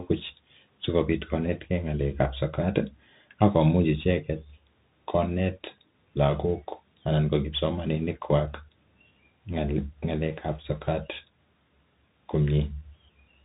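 From start to finish the speech carries the marks of a Bluetooth CVSD headset codec. Nothing passes above about 3.8 kHz, so a spectrogram shows a hard, flat ceiling with empty space above it. CVSD codes each sample as a single up-or-down step whose size adapts, and here the damage is plainly audible: sibilants turn scratchy, loud bright moments distort as the step fails to keep pace, and a granular hiss sits beneath everything, consistent with a 64 kbps one-bit stream.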